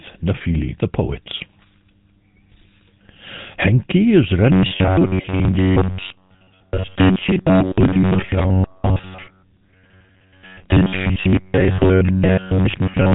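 From the start the whole clip has the GSM full-rate codec's gravelly buzz, with nothing above 3.8 kHz, which fits its 13 kbps regular-pulse coding. At 4.52 s the speech turns into a rigid metallic drone pinned at 93.8 Hz until 13.14 s. This is likely robotic sound from repeated short buffers, with roughly 10.7 ms chunks looping over most of the audio.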